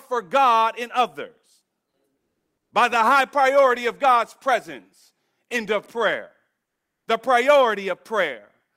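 From 6.65 to 7.05 s, just after "presence into prayer", the real background drops out and comfort noise stands in for it for about 400 ms. This is likely discontinuous transmission, where the sender goes quiet during the pause and the receiver fills it with synthetic noise. It sounds flat and featureless, and about 9 dB quieter. On a spectrogram the textured background gives way to a smooth, uniform wash. The waveform shows a lower, even noise floor until the sound resumes.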